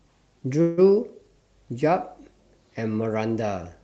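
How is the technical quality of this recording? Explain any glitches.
The recording carries call-codec coloring, with the top end stopping around 8 kHz, and one glitch. From 0.61 to 0.79 s there is a call audio freeze: the sound stalls into a fading buzz, likely because delayed packets emptied the jitter buffer. Unlike a dropout, nothing is lost, and speech resumes exactly where it stopped.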